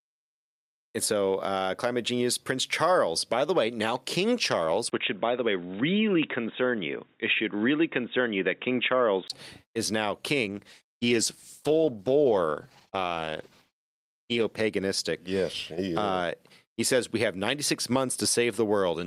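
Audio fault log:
4.90–9.30 s, input switched to a poorer device: The recording likely moved to a narrower-band microphone or a headset call profile. After a 20 ms gap, everything above 3.8 kHz is gone, so speech turns dull and boxy, with faint new noise about 55 dB down and no real level change.
10.44–14.69 s, call bitrate drop: The encoder's budget fell from 64 kbps to 15 kbps and stayed at the bottom for about 4.2 s. With so few bits, speech is coded coarsely and sounds rough and watery until the rate recovers.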